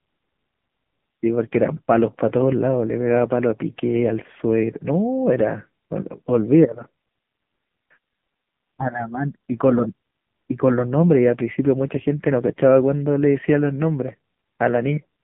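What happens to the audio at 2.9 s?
At 2.9 s you're hearing the AMR narrowband mobile codec, which runs through the whole clip. The speech is squeezed into a phone band of roughly 150 Hz to 3.5 kHz with nothing above 3.7 kHz, and the heavy buzzy, synthetic coloration fits a low-rate mode around 6.7 kbps.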